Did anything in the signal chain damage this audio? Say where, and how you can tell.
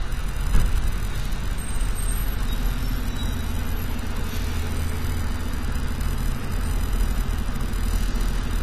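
Yes, at the codec stage, and throughout the recording. The sound is dull and smeared from start to finish, with a fizzy, warbling texture on sustained and noisy content, and the spectrum stops at 14 kHz with nothing above it. That pattern fits AAC compression, likely AAC-LC at a low bitrate around 32 kbps. Short of bits, the encoder lowered its cut-off and quantised the remaining bands coarsely against its hearing model, leaving holes in the spectrum.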